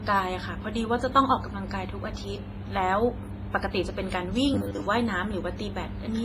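Speech, and the whole thing carries heavy codec damage that sounds like WMA compression is the likely culprit: a ringing, washy quality with hiss that swells and sinks along with the talker, plus nothing at all above 15.5 kHz. That smeared texture comes from a transform codec quantising long blocks, so the noise gets spread over tens of milliseconds, and weak detail simply drops out, which fits a low bitrate somewhere around 24 kbps. Then from 4.54 to 4.86 s there's robotic sound from repeated short buffers: the sound collapses into a stiff, metallic 100 Hz buzz that only loosely tracks what should be there. The cause is probably audio arriving too slowly, with the playback side looping the last 10 ms or so to fill gaps while the real material is skipped. Most of that stretch ends up being repeats rather than fresh audio.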